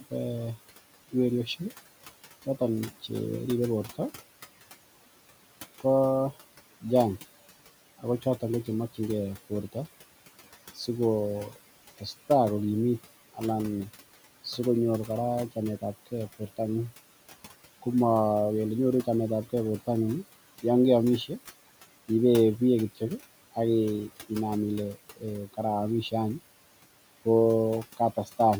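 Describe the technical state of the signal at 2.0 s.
At 2.0 s the noise suppressor is acting on the signal, as it does throughout the recording, producing noise suppressor artifacts. Frame by frame it estimates which frequency bands hold steady background noise and pulls them down by about 16 dB. The room noise, sitting about 18 dB below the speech, is therefore pumped: it drops away in the gaps between words and swells back up beneath the speech whenever someone talks.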